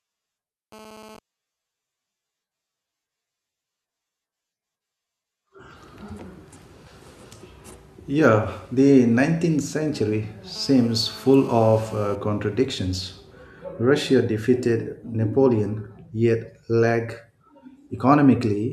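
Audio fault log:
0.72–1.19 s and 10.56–12.16 s: GSM phone buzz. A hard, raspy 217 Hz buzz with dense harmonics sits about 22 dB below the speech. A nearby 2G handset's transmit bursts are being rectified in the audio circuitry. The first, shorter patch fits intermittent data traffic, and the longer second one fits a call in progress.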